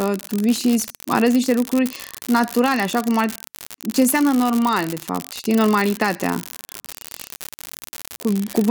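A speech recording with an unreliable data bit throughout. One bit of the digital samples flips at random. Each flip adds a spike of fixed size, about -8 dBFS. The result is a constant crackling fizz. It persists through the pauses between phrases.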